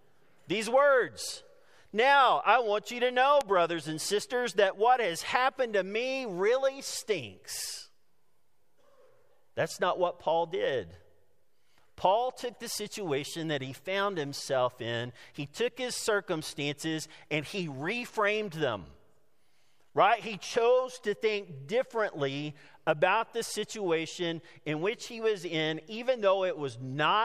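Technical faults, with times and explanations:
3.41 s and 4.21 s, bit error spike: two isolated ticks, each a single flipped bit in a stored or transmitted sample value. At 3.41 s the error spans three consecutive samples and peaks at about -15 dBFS. At 4.21 s it is a single sample, reaching about -27 dBFS. The value jumps by a power of two and snaps straight back, so each tick is broadband and bears no relation to the surrounding sound.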